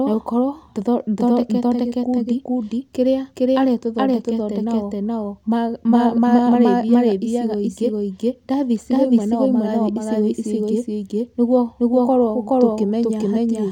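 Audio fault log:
throughout, doubled audio track: a second full-band copy of the speech runs behind the original by roughly 400 ms, at about the same level, so every syllable is followed by a distinct, equally loud repeat rather than a blend. The repeat carries no decay or room colouring, which rules out a natural echo. The likely cause is the same signal reaching the mix twice, once through a slower capture or processing path.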